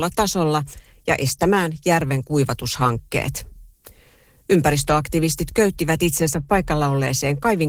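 Opus voice compression runs throughout. Coarse low-rate coding, fitting about 16 kbps in hybrid mode, makes the speech plainly hoarse and slightly robotic.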